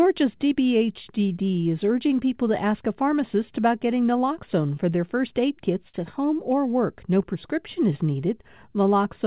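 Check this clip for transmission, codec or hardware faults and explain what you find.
Three timing faults are present in this speech, two of them stemming from the sender's clock.

Clock drift between sender and receiver runs through the whole clip. The sender's clock is running roughly 3% slow, so the receiver's jitter buffer keeps draining and must be topped up. You hear an unsteady tempo rather than any single glitch. On a waveform, syllable spacing is slightly uneven across the clip.

Repeated timing corrections span 0.04 to 9.15 s. Playback sits at 97% speed as the receiver repeats short pieces to cover the slow sender, adding about a third of a second in total. The corrections are unevenly spaced and all lengthen the sound. Each is heard, if at all, as a faint hiccup. On a spectrogram they appear as tiny duplicated slices at segment boundaries.

A short stall from a late packet occurs at 5.88 to 5.97 s. 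The buffer ran empty, and the receiver stretched the last sound for 53 ms until the packet arrived. Nothing is lost, but a sound is held too long. The spectrogram shows flat, smeared harmonics there, and the waveform shows a repeated cycle.

These sit on top of the G.711 call path, whose band-limiting leaves nothing above 4 kHz.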